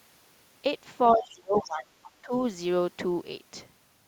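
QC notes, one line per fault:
1.12 to 1.94 s and 2.22 to 2.32 s, speech suppressed in double talk: the talker's level dips while the far end speaks, likely an echo canceller ducking both. The first dip goes down about 25 dB and the second about 15 dB, with envelope notches and high bands thinning on a spectrogram.
1.63 to 1.71 s, other side's voice leaking through: a brief scrap of a second voice sits about 20 dB under the talker, likely residual loudspeaker echo the canceller missed. It appears as a faint, separate harmonic pattern inside the suppressed stretch.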